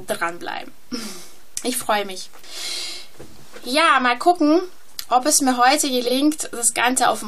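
At 6.05 to 6.11 s, frames out of order: two adjacent 23.2 ms blocks play swapped, giving a brief garbled flutter and no lost time.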